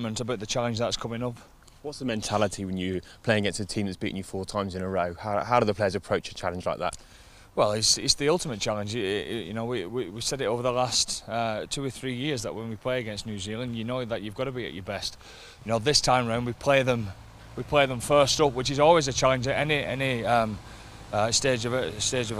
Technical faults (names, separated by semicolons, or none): none